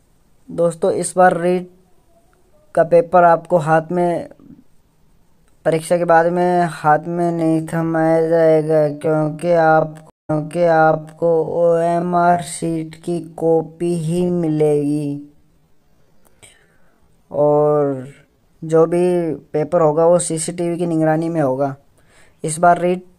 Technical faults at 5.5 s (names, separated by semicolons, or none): none